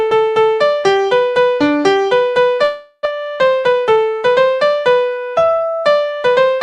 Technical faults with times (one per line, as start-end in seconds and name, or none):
2.63-3.07 long network dropout
3.11-3.42 jitter buffer slow-down
3.66-3.97 jitter buffer speed-up